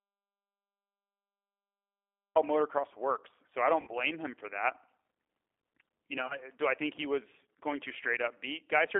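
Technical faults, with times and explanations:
Throughout, G.729 codec: the whole clip has gone through G.729A at 8 kbit/s on a 300 Hz to 3.5 kHz line, so it's thin and band-limited, and rebuilding the voice from a filter, pitch predictor and a few pulses per frame leaves it plainly rough and synthetic.
0 to 2.36 s, audio dropout to silence: the clip opens already in dead digital silence with no room tone at all, and the speech cuts in at "motocross works". Whatever came before is simply gone, most likely because the input link or device dropped and silence was written meanwhile.
3.81 to 3.95 s and 6.22 to 6.38 s, VoIP packet loss concealed by the speech codec: about 70 ms lost in the first spot, with a 60 ms run, and 40 ms scattered over 80 ms in the second. The decoder stretches its last pitch and filter into a buzzy tone or coloured noise that fades, before "him for that" and "do I think he", and the voice sounds weak for a moment after.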